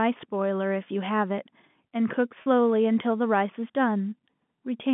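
At 2.42 s, 40 ms of speech failed to arrive, which fits two 20 ms packets being lost. The receiver bridged the gap with pitch repetition, looping the last pitch period until 2.46 s, so the speech briefly holds as a slightly buzzy, frozen tone.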